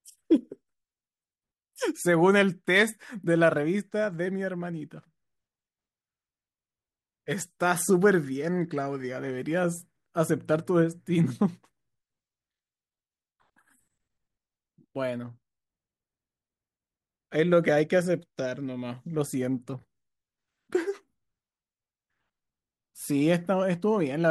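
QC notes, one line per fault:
throughout, sample clock jitter: the converter clock wobbles by a microsecond or so, mistiming steep slopes, so faint hiss about 40 dB down follows loud, bright speech and disappears in pauses.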